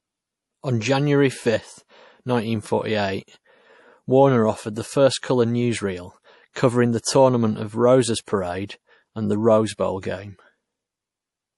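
Throughout the speech the sound is watery and swirly, with s sounds turning metallic and nothing above 11.5 kHz. This is plainly audible MP3 compression, likely at a low bitrate that fits about 48 kbps, where the encoder cuts the treble and lets weak frequency lines flicker between frames.

At 5.22 s, just before "colour newsreel covering the", a brief hiss of about 17 ms leads into a softened attack. From 8.24 to 8.28 s, just after "the tournament of roses", a longer 37 ms smear does the same. Both are pre-echo: the codec spread quantisation noise across its block, filling the quiet gap ahead of each sharp onset.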